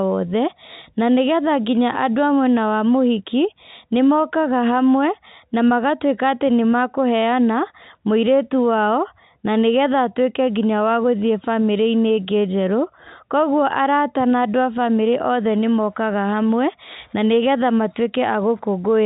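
No technical faults are audible.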